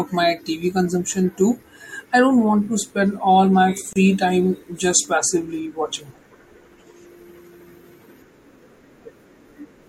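At 3.93 s the speech drops into a brief hole of about 30 ms, its edges smeared, before carrying on where it stopped. This is a gap at a join of encoded pieces: separately encoded pieces were joined untrimmed, leaving encoder delay and padding.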